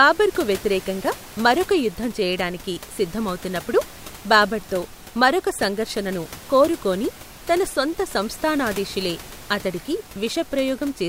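The speech signal shows no technical faults, with only the ordinary background noise of the room sitting about 19 dB below the speech.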